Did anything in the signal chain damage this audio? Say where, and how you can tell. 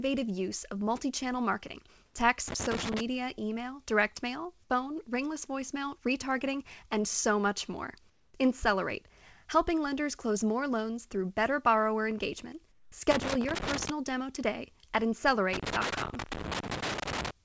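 Yes. In three short pauses, the room background goes flat and featureless: from 2.06 to 2.14 s (80 ms), just after "of multi channel marketing", at the same level; from 8.10 to 8.34 s, after "and so much more", about 3 dB quieter; and from 12.72 to 12.92 s, about 5 dB quieter. This most likely comes from call processing: discontinuous transmission paused the sender during silence, and the receiver filled the gaps with synthetic comfort noise in place of the real background.

Irregular bursts of scratchy crackle cut into the signal from 2.48 to 3.01 s, ending just before "email direct mail phone", then again from 13.11 to 13.90 s and from 15.53 to 17.31 s. The ragged, stop-start texture points to the analogue wiring stage: a loose connector whose worn or dirty contact keeps making and breaking as it shifts, chopping the signal and throwing pops from any DC on the line. The sound above 8 kHz is cut off throughout, which fits the wideband call codec on the path.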